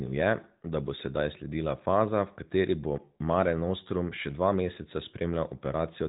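No technical faults are audible.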